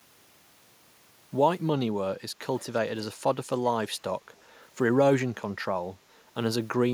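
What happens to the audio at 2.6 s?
An echo leak is the likely cause: a loudspeaker-side echo canceller let some of its microphone pickup return down the line. From 2.59 to 2.79 s, a faint copy of the speech trails the original by about 0.37 s, roughly 30 dB quieter.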